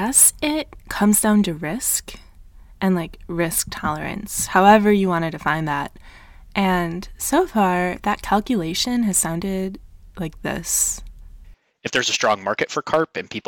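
Sample clock jitter runs through the whole speech clip. The converter's timing wobbles by something on the order of a microsecond or two, so each sample lands slightly off its intended instant, and the error is largest where the waveform changes fastest. The result is a grainy hiss, roughly 30 dB below the signal, that swells on loud and bright sounds and drops away in the pauses. A steady noise floor would instead keep hissing through the silences.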